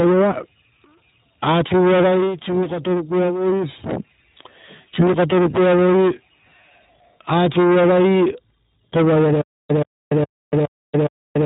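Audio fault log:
throughout: iLBC codec. The speech is band-limited to below 4 kHz, giving a narrowband telephone sound, and has a plainly audible rough, slightly synthetic edge. The damage level and texture fit a rate near 15.2 kbps with 20 ms frames. Each frame's excitation is coded on its own rather than predicted from the previous one, which trades some smoothness for robustness and leaves that buzzy, processed quality on voiced sounds.
5.00 to 5.04 s: lost iLBC frames. A single 20 ms frame goes missing here, and the decoder fills the hole by repeating the last pitch cycle blended with noise. The result is a very brief held, faintly buzzy vowel-like smear in place of the real sound. Because iLBC frames do not depend on their predecessors, the voice snaps back to normal coding immediately afterward with no lingering distortion.
9.41 s to the end: stutter with silent gaps. A 125 ms fragment plays, then about 289 ms of digital silence follows, and the same burst returns on an even cycle of roughly 414 ms, five times through to the end of the clip. 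The most likely cause is a stalled player or stream that replays its last buffered fragment on each retry and then runs dry. The speech that should have filled this stretch is lost.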